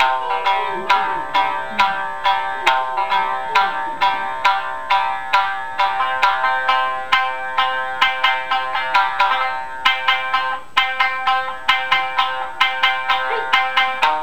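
Imaging from linear upsampling runs throughout the recording. The sample rate was raised by joining neighbouring samples with straight lines, which fits a conversion from about 22 kHz to 48 kHz. That crude interpolation filters poorly, so the top of the original band sounds dulled while faint mirrored copies of the spectrum, roughly 40 dB down, fill the region from about 11 kHz to 22 kHz. These images add a light metallic shimmer to bright, high-frequency sound.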